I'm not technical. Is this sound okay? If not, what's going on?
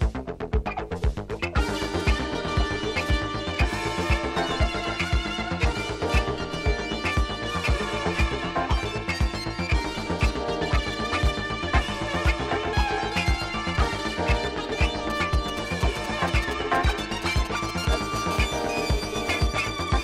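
No. From 15.10 to 18.18 seconds there are GSM signalling bursts. A nearby 2G mobile phone is talking to its network. The audio equipment picks up those radio pulses. You hear a galloping dit-dit-dit of short buzzes, fairly loud against the sound.

From 18.31 to 19.47 seconds comes a GSM phone buzz. Now the phone seems to be in an actual call, sending pulses about 217 times a second without a break. That becomes a steady, harsh, raspy buzz that has nothing to do with the recorded sound.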